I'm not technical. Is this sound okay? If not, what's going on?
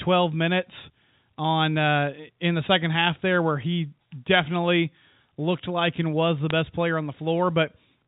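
No. At about 6.50 s, just after "like and was the" and before "player on", there's a brief burst of damaged samples. That's bit errors on a digital phone line: a few flipped bits corrupt single samples. Unlike a dropout, no sound goes missing. It's just a few damaged samples on top.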